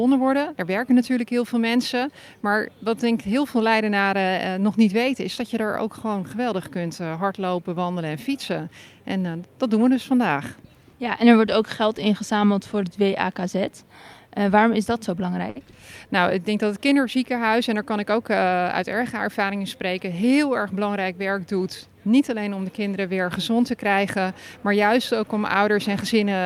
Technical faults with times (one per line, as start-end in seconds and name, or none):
15.49-15.58 short stall from a late packet